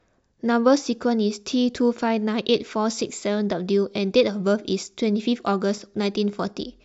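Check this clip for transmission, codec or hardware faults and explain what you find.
I find no faults to report anywhere in the clip.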